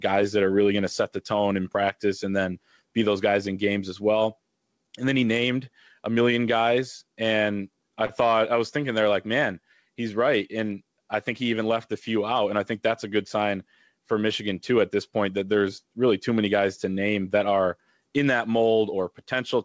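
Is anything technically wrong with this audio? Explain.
Yes, there are two faults.

Gain pumping runs through the whole recording. The level swings by roughly 10 dB, likely because the input gain was set far too high and a fast limiter or compressor clamps down on each loud syllable. Loud and quiet passages sit unnaturally close in level, giving a squashed, breathing quality, heard through the G.722 call path's band-limit at 8 kHz.

A short stall from a late packet occurs at 8.06 to 8.12 s, just before "thought I was thinking". A packet arrived late, the jitter buffer ran dry, and the receiver stretched the last bit of audio for about 31 ms until the data caught up, then resumed from the same point. Nothing is lost, but that instant of sound is held slightly too long, with a faint buzz or dip in level.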